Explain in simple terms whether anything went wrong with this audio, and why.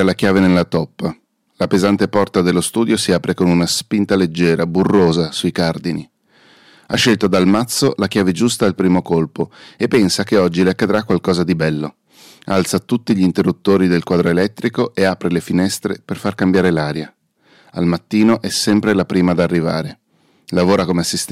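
Throughout the recording, the loudest moments of the speech pick up a rough, crackly edge, like a brief buzz riding on the strongest syllables. That is hard clipping. The sound was pushed louder than part of the recording chain could handle, so the tops of the biggest sound waves were sliced off flat. Only a small share of the audio goes over the limit, which is why it crackles on peaks rather than sounding fuzzy all the way through.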